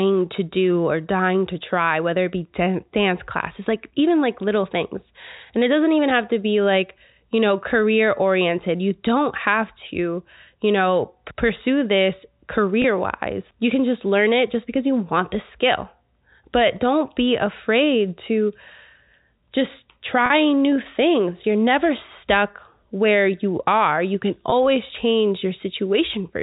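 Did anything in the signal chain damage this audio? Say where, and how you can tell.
Yes, network packet loss with pitch repetition: a buzzy held pitch for 20 ms at 12.82 and 24.5 s, and 40 ms at 20.26 s, where the last pitch period loops over the gaps.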